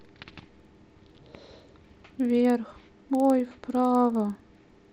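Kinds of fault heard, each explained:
Resampler restarted on every block: a steady 20 Hz ticking buzz under the speech, from each 50 ms block being converted from 16 kHz to 48 kHz separately, leaving small errors at every block edge.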